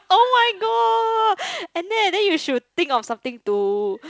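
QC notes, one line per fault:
The speech is carried by G.722 wideband telephone coding at 64 kbit/s, which keeps the band up to about 7 kHz, and no fault stands out anywhere in the signal.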